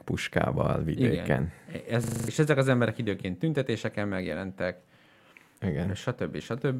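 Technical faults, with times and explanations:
2.04–2.28 s, system hang loop: the system froze while the sound hardware replayed one 40 ms buffer, six identical repeats at 25 Hz forming a rattling buzz, losing about a fifth of a second of speech. Unlike a dropout, nothing goes silent; one fragment repeats exactly.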